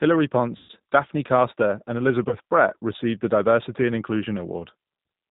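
Throughout, the G.729 codec at 8 kbit/s cuts everything above 4 kHz and rebuilds the speech from a filter and pulses, giving a rough, synthetic grain that a plain low-pass would not add. VoIP packet loss concealed by the speech codec follows at 0.57 to 0.71 s, about 120 ms lost, and again at 2.29 to 2.35 s, about 30 ms. The decoder stretches the last sound into a fading buzzy tone or coloured noise rather than leaving the silence of a dropout.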